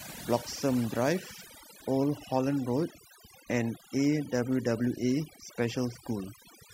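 It's a speech clip with overdone noise removal running the whole way through. The noise reducer was pushed too hard, so bands near its noise estimate get pulled right down. Gaps between phrases drop to near silence with twinkly specks.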